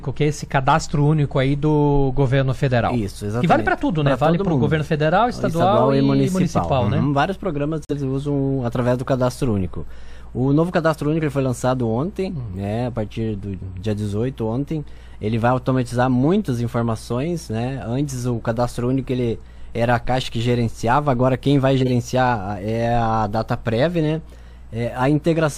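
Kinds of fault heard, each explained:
Corrupt frame muted: The decoder rejected a compressed frame damaged by flipped bits, and the player substituted silence for it. At 7.85 s the sound cuts out abruptly, leaving a hole of about 72 ms that fits a single lost frame. The sound resumes at 7.92 s with no shift in timing, because the missing frame was filled in place rather than skipped.
Corrupt frame decoded: Flipped bits reached the decoder, which played the damaged frames anyway. Misread codes and gains put energy at frequencies where it does not belong. From 21.78 to 21.90 s a short spurious sound cuts across the sound. It lasts about 120 ms, consistent with roughly three consecutive bad frames, and peaks at about −10 dBFS.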